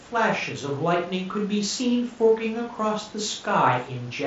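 Nothing goes wrong anywhere in this speech clip; it simply comes across as a wideband Bluetooth headset link would, with the sound capped at around 8 kHz and only a light graininess on louder sounds.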